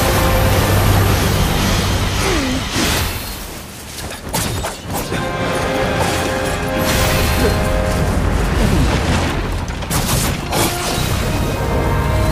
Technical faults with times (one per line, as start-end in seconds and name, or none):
none